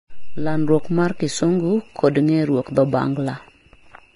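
Throughout the speech, heavy Vorbis compression is the likely cause: an encoder starved of data, consistent with roughly 29 kbps, discards everything above 10.6 kHz and quantises the remaining treble coarsely. The result sounds hissy and grainy, with roughened tones and blurred attacks.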